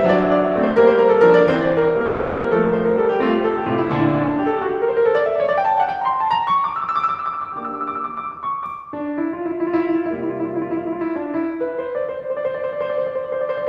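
A music recording with two timing faults from a packet-based call path. From 2.05 to 2.46 s, a call audio freeze occurs. Incoming packets were likely held up in transit long enough for the jitter buffer to run dry, so the receiver bridged the wait by extending the last sound it had for about 390 ms. That stretch is heard as a smeared, buzzy continuation rather than silence. When the music resumes it picks up exactly where it left off with nothing lost, so everything afterward arrives roughly 390 ms later than it should. From 9.51 to 11.45 s comes a jitter buffer speed-up. With more audio queued than it wanted, the receiver shed the surplus by repeatedly cutting out tiny pitch-period slices, trimming about a tenth of a second overall. The music plays at 105% speed without any change in pitch, so the passage sounds slightly rushed and the beat briefly pulls ahead of its steady tempo.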